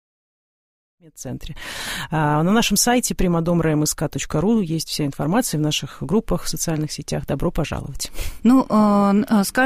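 There are no technical faults to describe; the sound simply fades in smoothly from about 1.0 s, reaching full level at about 1.72 s.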